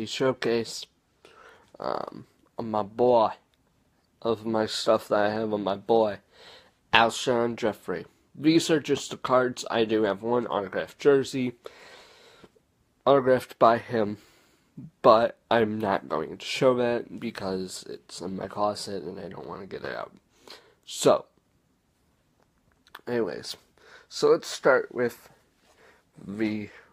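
No technical faults are audible anywhere in the audio.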